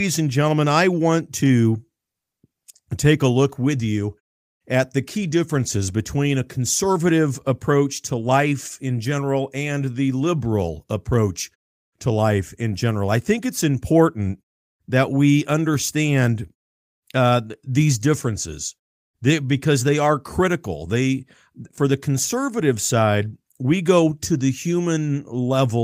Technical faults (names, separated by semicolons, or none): none